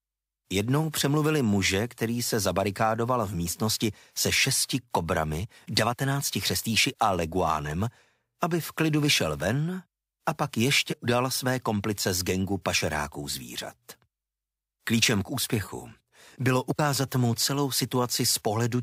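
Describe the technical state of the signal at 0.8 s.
At 0.8 s the signal is intact, with no dropout, distortion, glitch or other technical fault.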